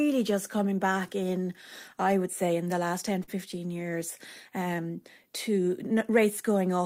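At 3.23 to 3.30 s the speech briefly hangs, one sound held a little too long with a faint buzzy texture, then carries on where it stopped. It is a short stall from a late packet: the jitter buffer ran dry, about 43 ms was filled by stretching, nothing was lost, and playback ends up 43 ms later.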